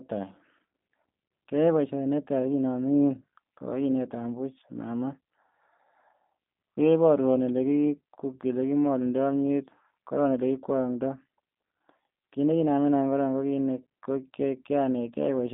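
Speech, carried for its whole length through a G.729 codec, the G.729A variant. Nothing is heard above 3.7 kHz, and the low end falls away below 200 Hz, leaving the narrow telephone band of 200 Hz to 3.6 kHz. The codec damage is plainly audible as a rough, slightly synthetic sound. Each short frame is rebuilt from a vocal tract filter, a pitch predictor and a handful of pulses, which fits an 8 kbit/s rate.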